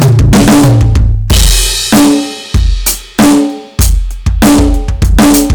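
Hard clipping runs throughout the music: the signal is overdriven by about 24 dB, so nearly a third of samples hit the ceiling. The waveform shows flat-topped slabs, the spectrogram bright harmonic smear, heard as constant harsh fuzz.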